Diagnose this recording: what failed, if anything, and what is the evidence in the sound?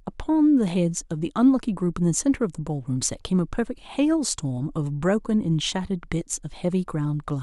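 Nothing failed, and the sound gives no evidence of any fault at any stage.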